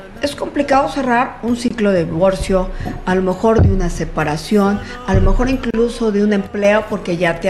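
A gap at a join of encoded pieces opens at 1.68 to 1.71 s (about 23 ms) and again at 5.71 to 5.74 s (32 ms), four seconds apart. Separately encoded sections were butted together untrimmed, so each encoder's start-up delay and final-frame padding leave a short, slightly smeared silence before the audio resumes where it stopped. One channel drops out from 6.47 to 6.65 s: the level falls abruptly by about 6 dB, likely because one stereo channel went missing, so the mono sum carries only half of the shared material.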